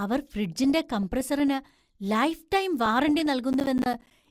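A speech recording with burbling from 0.52 to 1.48 s and again from 2.84 to 3.26 s: DAB burbling, where bit errors of a fraction of a percent slip past error correction and make individual sub-bands jump in level frame by frame. From 3.53 to 4.11 s a gritty crackle rides over the speech, processor overload crackle from a string of missed deadlines, around fifteen, each dropping a silent gap of roughly 10 ms.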